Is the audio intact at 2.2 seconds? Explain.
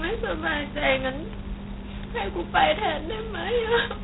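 No. At 2.2 seconds the speech carries G.726 ADPCM damage, present throughout the clip. Coarse adaptive-prediction difference coding, consistent with the 16 kbit/s mode, adds a harsh, rasping hiss that tracks the speech level, and nothing above 3.9 kHz passes.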